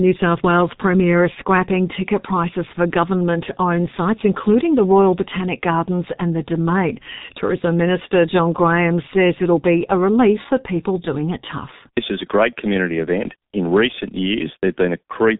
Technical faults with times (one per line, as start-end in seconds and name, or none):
0.00-15.39 G.723.1 codec